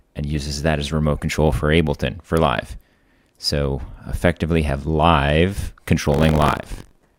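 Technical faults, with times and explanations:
6.10 to 7.19 s, buffer tearing: a steady rattling buzz at about 47 Hz rides on the audio from 6.10 s to the end and is present only where there is signal. The write and read positions in the playback ring buffer have drifted until they cross in every period. Roughly a fourteenth of each period replays audio from one lap earlier, around 70 ms old, with a hard splice on both sides. The buzz repeat rate fits a 1024-sample buffer.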